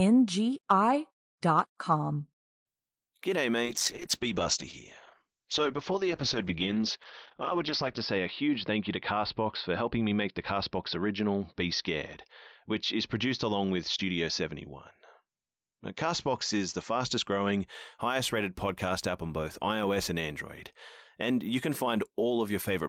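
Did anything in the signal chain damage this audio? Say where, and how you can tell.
Yes. From 3.65 s to 17.73 s, just before "highest rated podcast app", the speech turns muffled and rough, with a watery, smeared texture. The top end collapses from a full 20 kHz band to about 6 kHz, and the worst stretch lasts about 4.35 s. This is a call bitrate drop at the codec stage: the network's bandwidth estimate fell, the encoder was cut from a rate consistent with roughly 40 kbps to around 8 kbps, and it coded more coarsely and low-passed the signal until the rate recovered.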